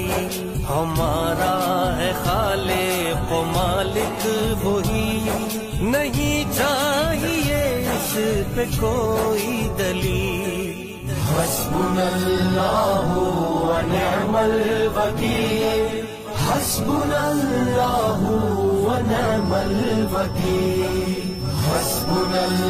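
From 19.3 s to the end, a thin feedback whistle near 5.4 kHz, slowly swelling and fading, sits about 15 dB below the signal, likely from a loudspeaker-to-microphone loop held just short of runaway.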